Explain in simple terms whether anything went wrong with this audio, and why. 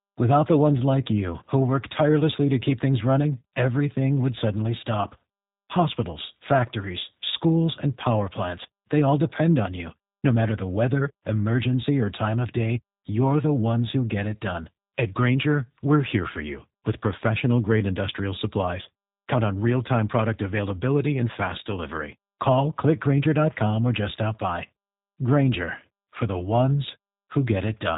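Something did go wrong: the whole clip, from start to finish, has been squeezed through the G.729 codec, a very compact format built for internet phone calls. Rather than storing the speech itself, it keeps a rough recipe for the voice and rebuilds it on playback. That's why everything sounds slightly rough and synthetic, and why nothing above about 3.8 kHz survives, leaving the speech muffled and phone-like, with the crisp edges of consonants dulled.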